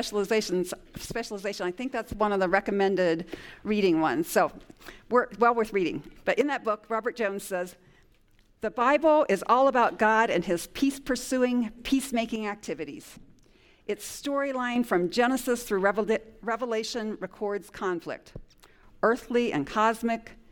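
The audio drops abruptly by about 6 dB four times: 1.06 to 2.21 s, 6.41 to 8.81 s, 12.36 to 14.76 s, and 16.43 to 18.83 s. Each dip ends just as suddenly. The likely cause is one channel dropping out before the mono sum.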